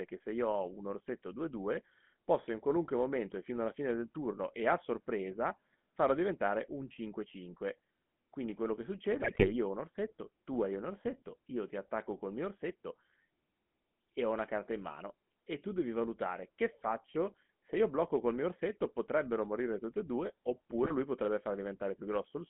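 The whole speech clip runs through a GSM full-rate codec. The sound is squeezed into a phone band of about 150 Hz to 3.4 kHz. The codec rebuilds the voice from a vocal-tract model driven by sparse, evenly spaced pulses. That coarse excitation leaves a buzzy, gravelly roughness that is plainly audible throughout. The thinness and grit fit a 13 kbps full-rate stream.

GSM bit errors break in twice. From 9.22 to 9.52 s, between "quello che" and "ho un orsetto tu", corrupted filter, pitch and gain values reach the decoder. The spectrum twists and the level jumps, giving squawks and gargling. The damage spans about a dozen frames and fits an error rate near 3%. At 20.83 to 20.91 s, after "morire tutte e due" and before "lui potrebbe", a shorter burst of pops covers a few frames.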